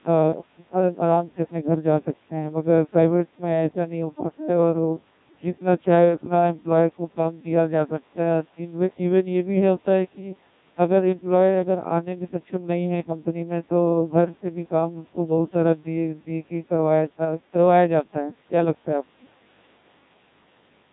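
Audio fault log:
Throughout, Codec 2 vocoder: the speech was reduced to pitch, voicing, energy and a coarse spectral envelope, then rebuilt from sine waves, with heavy damage at a rate that fits about 1.6 kbit/s. The waveform is lost, so the voice sounds robotic and buzzy.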